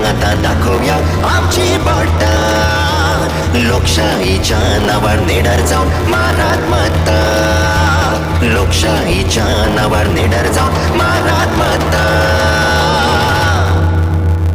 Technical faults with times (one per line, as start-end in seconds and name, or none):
0.00-14.55 block size mismatch (truncated)